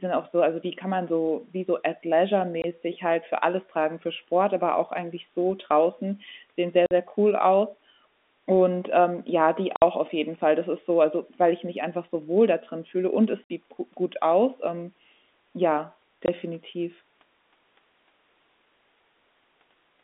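Telephone-band speech, carried over G.711 coding with its narrow line band of roughly 250 Hz to 3.6 kHz, is broken by packet loss filled with silence at 2.62–2.64, 6.86–6.91, 9.76–9.82, 13.44–13.50 and 16.26–16.28 s. Lost audio was replaced by silence, creating dropouts of 20, 50 and 60 ms, all multiples that fit 10 ms packets. A waveform shows flat-line gaps, and a spectrogram shows blank vertical stripes.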